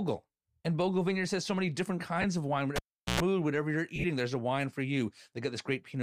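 At 2.22 s, just after "has so many different", lost LE Audio frames leave a 20 ms grainy smear as the decoder repeats the last spectrum, which fits two 10 ms frames. At 2.76 s, after "of wine", a cable pulled and plugged in gives a pop, about 0.39 s of near silence, 105 ms of 60 Hz mains buzz, then a second pop by 3.20 s. From 3.96 to 4.05 s, before "there's a wine for", more lost frames scatter 60 ms of noisy smearing across 80 ms, the longest run about 30 ms, over a slight breathy edge likely from light LC3 compression.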